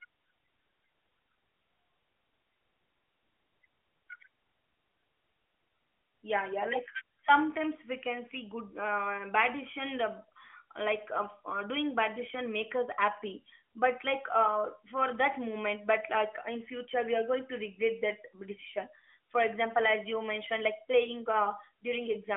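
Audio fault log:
No faults are heard anywhere in this speech.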